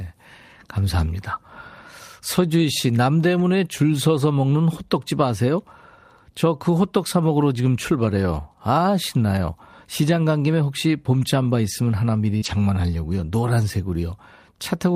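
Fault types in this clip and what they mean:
Lost packet rebuilt from error correction: a missing packet replaced by the low-bitrate copy carried in the next one, so speech never drops out but turns briefly rough and noisy. Heard at 3.39 s and from 12.42 to 12.56 s. Unlike concealment, real speech content continues.
Short concealed packet loss: about 40 ms at 12.37 to 12.44 s where no audio arrived and the decoder extended the previous sound before blending back. This gives a brief smear or wobble of invented continuation rather than a degraded copy of the actual speech.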